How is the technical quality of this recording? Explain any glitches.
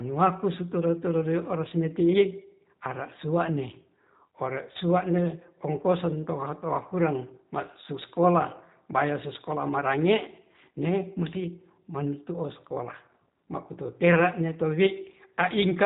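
Throughout the recording the speech sounds band-limited, with a rough, synthetic edge that is plainly audible. That is G.729 codec damage, and the sound fits the 8 kbit/s rate that codec runs at. It does not store the waveform. It rebuilds each 10 ms frame from a vocal tract filter, a pitch predictor and a handful of pulses, and discards everything above 4 kHz. The speech stays intelligible, but it sounds dull, slightly robotic and coarse.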